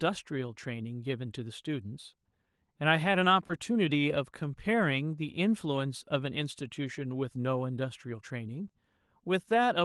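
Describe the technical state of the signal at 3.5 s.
At 3.47 to 3.51 s there is a short concealed packet loss: about 20 ms of audio never arrived and the receiver bridged the gap by extending the preceding sound, heard as a brief smear or wobble. On a spectrogram, the extended sound runs unnaturally smooth across the gap before blending back, beneath the call path's roughly 12 kHz ceiling.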